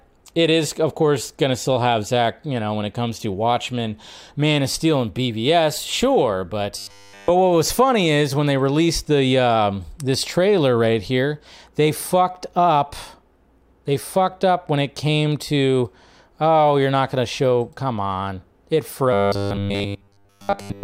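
From 6.78 to 7.30 s and again from 19.13 to 20.83 s, the speech collapses into robotic sound from repeated short buffers: a rigid 100 Hz metallic buzz, likely from a roughly 10 ms chunk replayed in place of essentially all fresh audio. Unlike codec warble, the buzz sits at a fixed rate and follows the voice only roughly.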